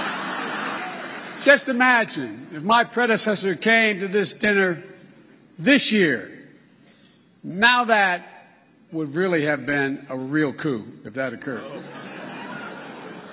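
No technical faults are audible anywhere in the clip.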